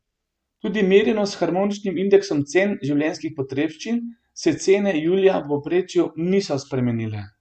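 No technical faults are audible anywhere in the speech.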